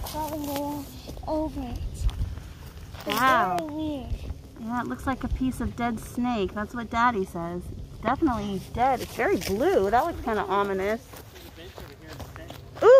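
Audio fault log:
0.56–0.58 s, 3.59–3.61 s and 8.08–8.10 s: loud pop, three single pops, each about 20 ms long, peaking roughly 15 dB above the surrounding sound at the first and about 20 dB at the other two. A sudden voltage step, likely from a switch, plug or static discharge, is shaped by the circuitry that follows it into a short thump. Unlike a dropout, the sound carries on underneath, and each pop has more body than a tiny digital click.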